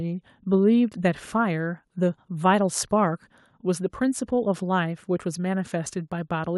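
No technical faults are audible.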